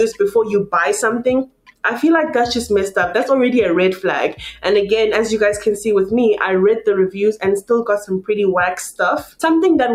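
A noise suppressor meant for speech has been applied to music or sounds: it treats held tones and tails as noise, so the level swings by around 10 dB, with steady parts sinking and fluttering while attacks pass. Unlike compressor pumping, the dips follow sustain rather than loudness. The sound is also cut by the noise suppressor from 1.45 to 1.83 s, falling by about 21 dB, and from 9.23 to 9.41 s, by about 17 dB. These are fades into sustained material rather than abrupt silent gaps, which separates them from dropouts.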